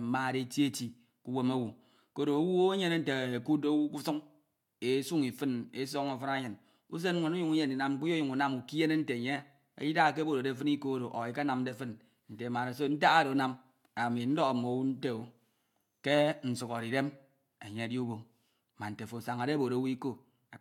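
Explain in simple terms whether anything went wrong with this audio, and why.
Nothing went wrong here: the recording has no damage to the signal anywhere along it.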